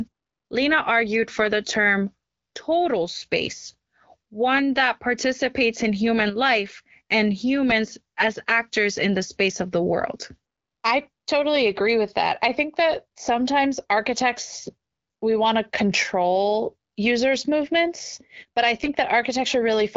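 At 18.83 to 18.90 s, right after "users' movements but I", AMR bit errors turn the speech hoarse and gargly. Pitch and loudness hold steady, with no gap or muting as packet loss would give. The burst's length fits about three corrupted frames, with roughly one bit in twenty flipped.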